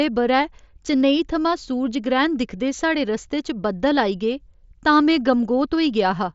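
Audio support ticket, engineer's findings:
Engineer's findings: no fault found in this speech audio, which comes through the mSBC Bluetooth headset codec with content reaching up to 7.7 kHz.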